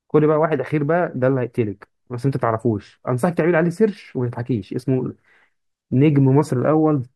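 Speech recording, no audible technical faults found.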